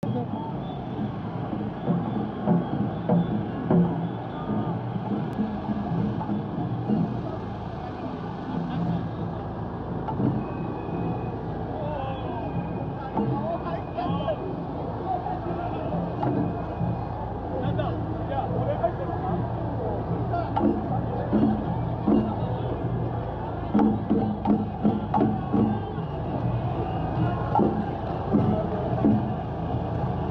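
No faults detected anywhere in the recording.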